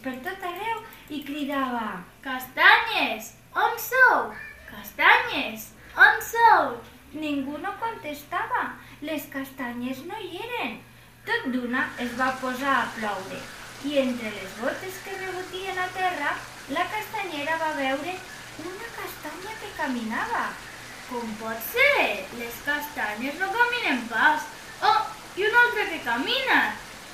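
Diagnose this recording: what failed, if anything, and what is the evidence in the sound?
Nothing stood out on listening that would point to a failure at any stage of the chain.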